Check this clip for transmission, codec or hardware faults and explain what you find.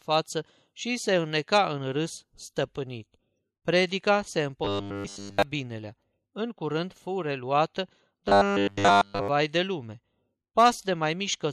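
Two stretches of robotic sound from repeated short buffers, at 4.65 to 5.43 s and 8.28 to 9.28 s (after "curând fu reluată", before "de lume"). New audio likely arrived too seldom, so a 10 ms slice looped in place of nearly all real signal. This locks the speech into a rigid, metallic 100 Hz buzz.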